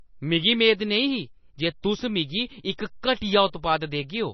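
A speech recording with heavy damage throughout, likely from MP3 compression. Nothing is left above about 5.9 kHz, so the top end is dull and closed in. The encoder had too few bits, so it cut the treble at a fixed point. It also dropped weak frequency lines that flicker on and off between frames. That gives the sound a watery, swirling texture. The damage fits a low bitrate near 24 kbps.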